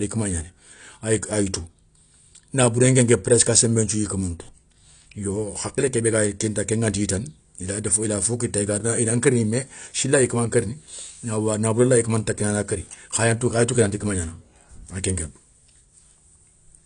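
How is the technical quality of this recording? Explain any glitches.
The recording has plainly audible damage from AAC compression throughout the speech. A low-bitrate AAC-LC encode, likely near 32 kbps, strips upper frequencies and coarsely quantises the rest, leaving sibilants dull, smeared and fizzy.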